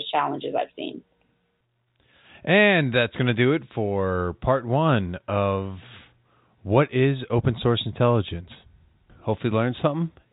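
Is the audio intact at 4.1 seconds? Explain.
Yes, at 4.1 seconds the speech is intact, carried through ordinary G.711 telephone coding with nothing going wrong at that moment.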